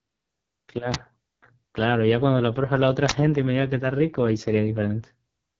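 AMR wideband (HD Voice) codec, throughout: the speech sounds rough and raspy, with nothing above 7.2 kHz. The encoder models speech up to 6.4 kHz and fills the top band with shaped noise. Damage this heavy fits the lowest 6.6 kbit/s mode.

Uninitialised buffer, at 0.94 s and again from 3.09 to 3.12 s: each is a brief, loud crack or burst of digital noise. A buffer was played before audio had been written to it, so leftover memory came out as sound. The 11 ms and 21 ms lengths fit 512- and 1024-sample blocks.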